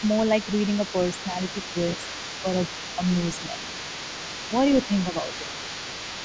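A speech recording from a call, with a second, fainter voice running underneath the main talker from start to finish. It sits roughly 15 dB below the speech. This is the other side's voice leaking through, likely because the talker's device was playing the other side on a loudspeaker and the echo canceller left residual echo in the microphone signal. The microphone path carries nothing above 8 kHz. Between 3.4 and 3.72 s the main voice dips by around 5 dB in short pieces adding up to about 150 ms. That pattern is speech suppressed in double talk. The canceller likely could not separate the near talker from the overlapping loudspeaker echo and attenuated both while the two sides spoke at once.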